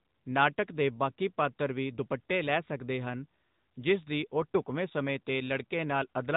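From start to finish the speech carries the sound of the AMR narrowband mobile codec. Nothing above 3.8 kHz survives, and the voice has a plainly audible buzzy, synthetic edge, because the codec rebuilds each 20 ms frame from a vocal-tract model excited by a few pulses rather than sending the waveform itself. The degree of damage fits a higher-rate mode near 10 kbps. A simple low-pass filter would only dull the sound, while this adds that artificial, pulse-driven texture.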